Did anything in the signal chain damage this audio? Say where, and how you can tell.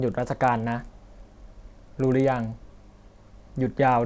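Yes. A resampler restarted on every block runs through the whole speech clip, from start to finish, as a regular ticking at 25 Hz that is present only while sound is present. That rate means 40 ms blocks. The damage sits in block-based sample-rate conversion, which sounds like a 48 kHz to 16 kHz step. Each block was converted without its neighbours' samples, so every block edge gets a small error, heard as a tick.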